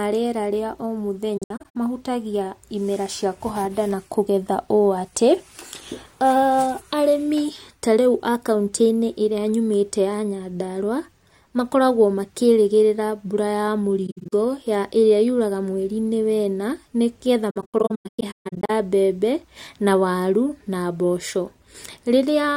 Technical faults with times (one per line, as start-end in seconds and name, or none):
1.37-1.76 AAC frame loss with muting
14.07-14.33 AAC frame loss with muting
17.50-18.70 AAC frame loss with muting